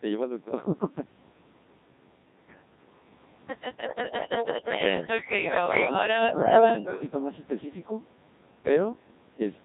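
Throughout, the speech passes through the Codec 2 vocoder at a rate that fits its 1.6 kbit/s mode. Only pitch, voicing, energy and a coarse spectral envelope survive, so the decoder rebuilds the voice from sine waves, and the damage is heavy: robotic, buzzy and smeared.

From 3.87 to 6.02 s there is an echo leak, likely from a far-end loudspeaker whose echo canceller let its microphone pickup return. A copy of the speech trails it by 320 ms, at roughly the same level as the original.

From 5.7 to 6.37 s the speech is suppressed in double talk, likely because the canceller confused the talker with echo and turned both down. The voice sinks deeply, losing strength for about half a second in all.

A second echo leak follows from 6.3 to 7.03 s, delayed by 330 ms and somewhat louder than the speech itself.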